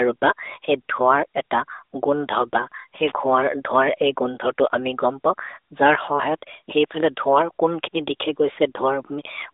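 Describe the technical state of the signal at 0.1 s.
At 0.1 s the speech is intact, with nothing going wrong at that moment.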